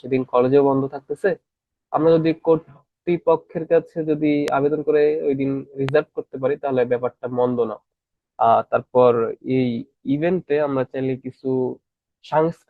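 A speech clip with two loud pops, at 4.48 to 4.50 s and 5.89 to 5.91 s, each a single sharp click peaking roughly 15 dB above the speech, which continues underneath. The likely cause is a brief voltage spike from a connector, switch or static discharge.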